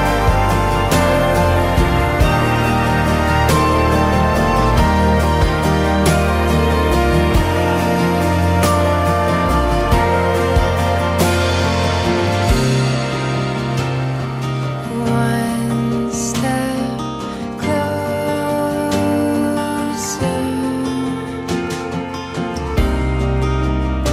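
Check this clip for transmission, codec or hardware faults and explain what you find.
No transmission, codec or hardware faults.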